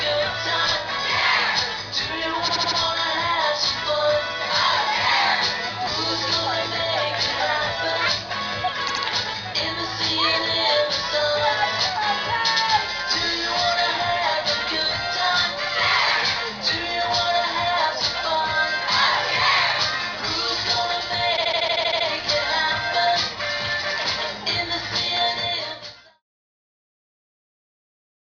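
Compressed frames were written more than once, so the decoder replays the same 78.4 ms block as repeated frames, heard as a stutter: four extra plays at 2.47 s, two at 8.87 s and nine at 21.36 s, lengthening the audio by 0.31 s, 0.16 s and 0.71 s. The block length fits a run of three frames of about 26 ms each. The smooth fade-out that ends at 26.2 s is a normal edit.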